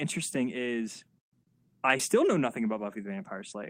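From 1.97 to 2.01 s, just before "know nothing", a brief smear is heard: short concealed packet loss, where about 20 ms of missing audio was filled by extending the preceding sound.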